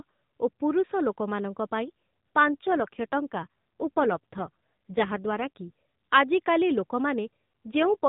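From 2.47 to 5.50 s, and again from 7.72 s to the end, there's an AMR rate drop. The speech turns rougher and buzzier with no gap or band change, which fits the codec stepping down from 12.2 to 5.9 kbps to protect a weak link.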